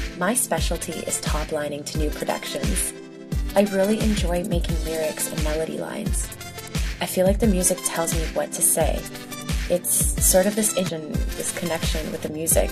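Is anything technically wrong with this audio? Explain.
Yes, two faults stand out near the end.

At 10.88 s a brief glitch cuts through the audio. This is damaged data in a compressed stream: corrupted bytes made the decoder misread a frame, lose sync and jump ahead to the next valid frame header.

From 11.29 to 12.28 s the sound is distorted. The likely cause is a stuck bit, one data bit held fixed so that roughly half the sample values are pushed off by that bit's weight, following the waveform's shape.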